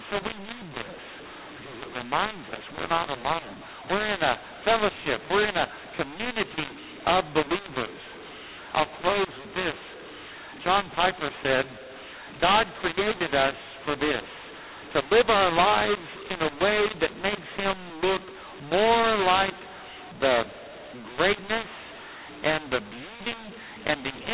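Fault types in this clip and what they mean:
mu-law and A-law mixed up: The speech was encoded with G.711 mu-law and decoded as A-law, so every byte is mapped onto the wrong logarithmic curve. Levels come out scrambled across the whole clip: some samples too loud, others too soft, and the quietest ones lifted well above silence, so pauses fill with noise. Unlike ordinary G.711 coding, whose faint quantisation noise stays far below the signal and follows it, this is a constant harshness with noisy gaps.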